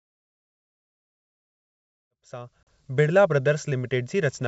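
A hard-edged 40 ms silent hole at 2.63 s breaks into the speech during the fade-in, then speech returns briefly and slightly distorted. This is packet loss on an ADPCM call. A few packets vanished, and the G.722 decoder's predictor and step size lost track of the sender's until they resynchronised.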